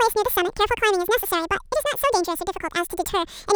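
From the very start the speech comes out at twice its proper rate and a full octave, 12 semitones, too high, the classic sign of audio read two samples at a time. Whatever played it treated each pair of samples as one frame, as if the data were stereo or twice as wide, so the timeline gets squeezed in half.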